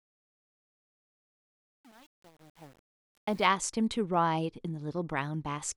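A speech clip fading from the start to 3.46 s shows truncation distortion on a fade. Through that whole stretch the quiet signal is gritty, which points to an undithered stage holding about 8 bits. This stepped grit tracks the level, unlike steady hiss.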